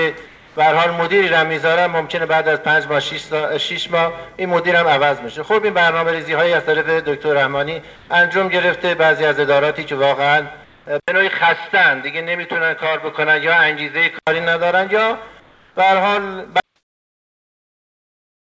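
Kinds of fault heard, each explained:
Sound dropped by the voice detector: at 0.26–0.56 s and 7.96–8.10 s, sound gives way to steady noise, likely because the detector mistook it for background.
Comfort noise in place of the background: at 10.64–10.86 s and 15.40–15.76 s, the real background becomes flat synthetic noise about 3 dB quieter, likely from discontinuous transmission.
Input switched to a poorer device: from 11.00 to 14.27 s the sound turns dull, with nothing above 5.1 kHz, after an 80 ms silence, likely a narrower-band microphone.
Audio dropout to silence: from 16.60 s to the end, the sound cuts to complete silence with no room tone, likely a lost input recorded as silence.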